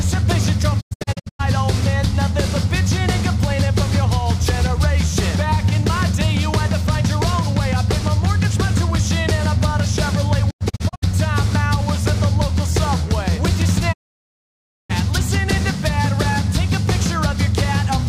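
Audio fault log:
0.80–1.41 s, 10.49–11.04 s, 13.92–14.92 s: digital broadcast dropout. The receiver mutes failed frames, leaving brief scattered holes, then a one-second gap. These show as blank vertical bands with 20 ms fades.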